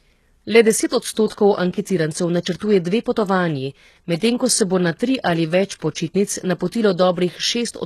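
Speech, likely passed through HE-AAC compression at a low bitrate around 16 kbps: nothing above 12.4 kHz, and the copied-up treble makes s sounds plainly gritty and metallic throughout.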